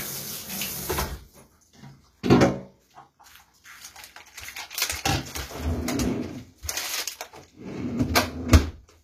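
Throughout, the treble sounds bright yet metallic and grainy, ending at 14.9 kHz. Synthetic rather than dulled highs suggest likely HE-AAC compression near 24 kbps.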